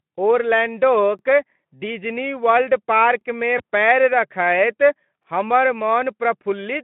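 Speech carried over a narrowband Speex line (about 150 Hz to 3.4 kHz) was processed in 2-second chunks that overlap at each join. About 21 ms plays twice at 1.19 s, 3.21 s (just before "पैर रखैत हमर") and 5.23 s (just after "पैर रखैत"), and each join is heard as a brief click or stutter. A single lost 20 ms packet at 3.58–3.62 s, again just before "पैर रखैत हमर", was concealed by the speech codec extrapolating from the preceding frame, which leaves a short buzzy or noisy smear that fades before the voice recovers.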